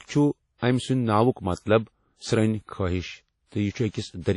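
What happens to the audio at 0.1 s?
At 0.1 s, as across the whole clip, the speech carries transcoding between lossy codecs, likely a low-rate WMA-style encode re-encoded to MP3. Unlike a single lossy pass, two kinds of smearing and swirl overlap, and nothing survives above 11.3 kHz.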